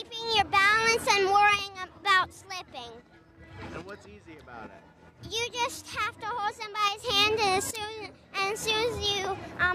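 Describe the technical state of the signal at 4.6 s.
At 4.6 s the signal is intact, with no audible fault at that moment.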